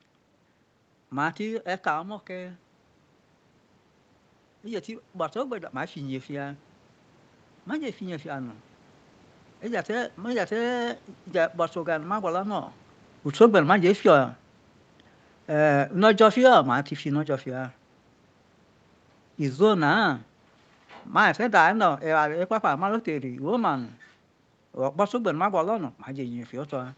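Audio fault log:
4.63–8.67 s, automatic gain rising: after the input drops by about 9 dB, the gain control slowly adds about 6 dB, so speech and room noise swell together. The waveform envelope and the spectrogram's noise floor brighten gradually across those four seconds.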